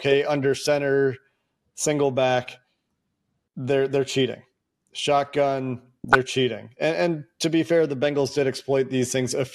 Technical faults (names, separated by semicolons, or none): DAB burbling